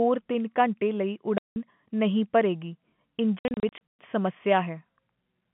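At 1.38 s the speech drops into dead silence for 180 ms, and from 3.39 to 3.98 s scattered gaps remove 330 ms, the longest 120 ms. This is packet loss filled with silence. Gap lengths fit 30 ms packets. Unlike concealment, nothing is repeated or smoothed, so the gaps have hard edges in the narrow telephone band of the G.711 coding.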